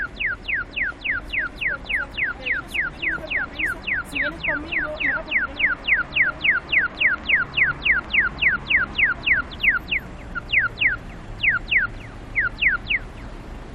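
At 5.07 s there is a short glitch. This is damaged data in a compressed stream: bytes in the encoded stream were corrupted, so the decoder could not read the affected frame, lost sync and resumed at the next valid frame header. The same fault returns from 9.53 to 9.55 s as another brief blip.

From 6.79 to 8.06 s a train of clicks sits over the sound. There are around seven sharp, similar pops at about 5.6 per second, unevenly spaced and peaking at roughly the level of the surrounding audio. The matching pulse shape and burst-like timing point to something injecting impulses into the path, likely electrical interference or a faulty connection or power supply.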